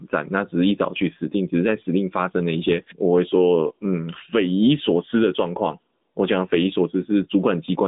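Throughout, the AMR narrowband mobile codec limits the speech to 150 Hz–3.7 kHz, with nothing above 3.8 kHz, and adds a buzzy, synthetic edge that a plain telephone band filter wouldn't.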